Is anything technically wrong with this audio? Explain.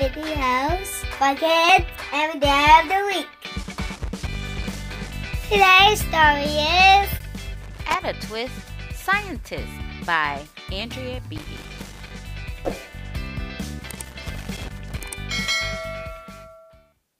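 Yes. Loose connector crackle occurs at 3.63–5.12, 7.61–7.95, 11.38–12.11 and 13.83–15.03 s: a faulty contact intermittently breaks the signal, producing irregular bursts of scratchy crackle.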